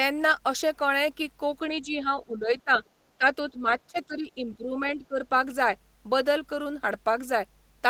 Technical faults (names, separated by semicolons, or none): mains hum; speech suppressed in double talk; other side's voice leaking through